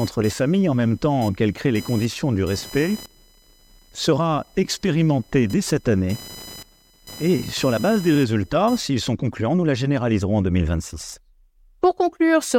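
Computer activity noise runs from 0.00 to 8.81 s: a buzz pulsing at around 1 kHz, roughly 20 dB below the speech. Shifting processor or graphics load disturbs the ground shared with the audio circuit, so the buzz follows the computer's activity, not the speech.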